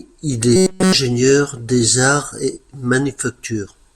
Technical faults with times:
0.56-0.94 robotic sound from repeated short buffers

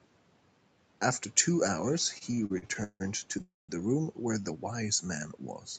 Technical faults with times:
2.18-3.42 repeated stalls (stutter)
3.42-3.71 call audio freeze

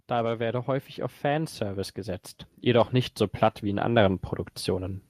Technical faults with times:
0.36-2.98 automatic gain rising
3.61-5.06 automatic gain rising

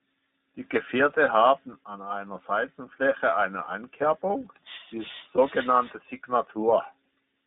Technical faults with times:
0.00-7.46 iLBC codec
5.36-5.39 lost iLBC frames

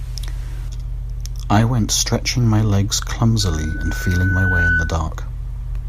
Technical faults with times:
3.40-5.04 loudspeaker feedback squeal

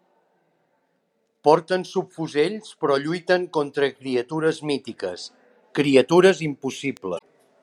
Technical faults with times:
3.96 damaged data in a compressed stream
6.18 bit error spike
6.97 bit error spike
7.15-7.22 damaged data in a compressed stream

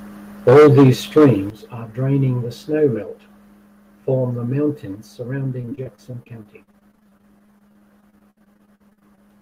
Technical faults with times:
0.48-0.90 microphone overload
0.49 microphone volume stepped down
1.17-1.31 microphone overload
1.50 microphone volume stepped down
5.61-9.19 repeated packet loss (robotic sound)

